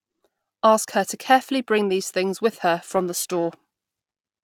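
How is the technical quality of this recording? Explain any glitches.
The recording has one fault, in its closing stretch. Periodic clock jitter runs from 2.9 s, just after "these things with her", to the end at 4.4 s. Interference wobbles the converter's sampling clock at around 1 kHz, spreading sidebands that far above and below every component of the speech, strongest on the higher frequencies. It gives a rough, metallic edge that disappears in pauses.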